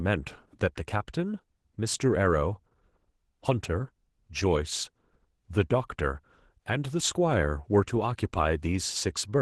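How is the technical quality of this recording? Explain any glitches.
The recording is degraded by Opus voice compression, audible across the whole clip. The encoder runs in hybrid mode, SILK coding the speech band with CELT adding content above 8 kHz, at a rate that fits about 16 kbps. The full band is kept, but the excitation is coded coarsely, so the speech sounds plainly hoarse and slightly robotic.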